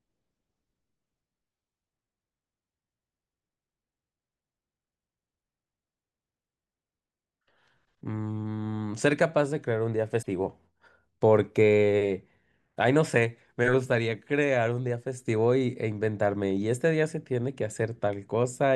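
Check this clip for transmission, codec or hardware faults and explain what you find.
One codec fault is audible in the speech. Damaged data in a compressed stream, 10.19 to 10.26 s: corrupted bytes make the decoder misread frames and hunt for the next header, giving a brief glitch, a chirp, squawk, click or short hole.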